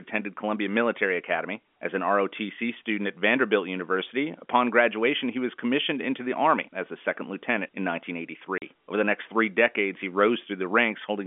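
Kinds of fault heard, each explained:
Packet loss filled with silence: a short run of packets never arrived and the receiver played plain silence in their place. The speech drops out for 40 ms at 8.58 s, which fits two 20 ms packets, and the hole starts and stops with abrupt edges.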